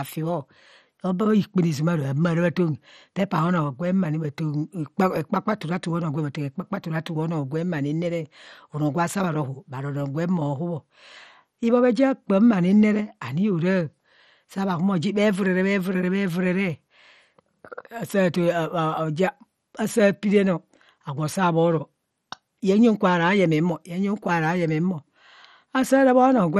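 Throughout the speech, heavy MP2 compression is the likely cause of dull, gurgling, granular distortion. The spectrogram shows upper sub-bands flickering off and nothing above 14 kHz.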